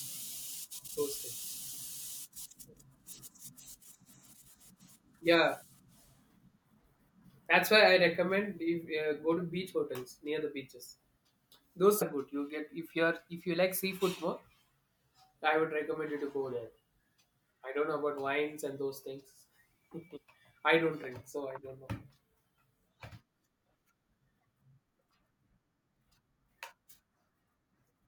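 At 9.4 s, 12.01 s and 20.16 s the speech jumps ahead as compressed frames are skipped. Each time, the decoder plays on without them and drops roughly 50 to 70 ms. A spectrogram shows a narrow discontinuity where speech partials shift abruptly.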